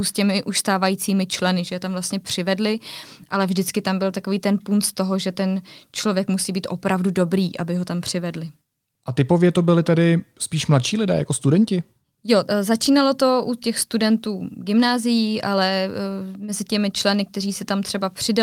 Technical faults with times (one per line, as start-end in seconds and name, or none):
none